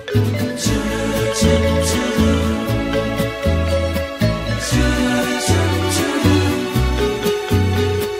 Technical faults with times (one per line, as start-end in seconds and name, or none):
none